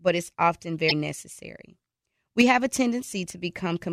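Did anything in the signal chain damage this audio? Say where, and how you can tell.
Yes: damaged data in a compressed stream, from 0.88 to 0.92 s, right after "it's often". A brief glitch breaks the speech for about 40 ms. Corrupted bytes in the codec stream made the decoder misread those frames and resynchronise on the next valid header.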